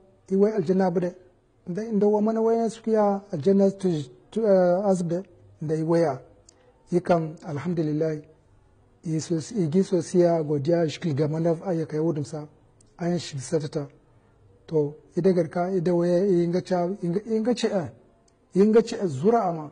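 Throughout the speech, nothing sits above 9.7 kHz, and the sound carries two layers of coding smear, the artefacts of both codecs heard together. This is likely transcoding between lossy codecs, consistent with a low-rate HE-AAC pass re-encoded as AAC-LC near 32 kbit/s. A spectrogram shows a hard ceiling at 9.7 kHz with blotchy, patchy energy below it.

Hard clipping occurs at 0.42 s, 7.11–7.14 s, 18.60–18.80 s and 19.28 s, where peaks exceed what a stage could pass by about 1, 3, 4 and 1 dB. The flattened tops add upper harmonics, heard as brief crackle, harshest at 18.60 s. The waveform shows squared-off peaks, and the spectrogram shows thin vertical streaks.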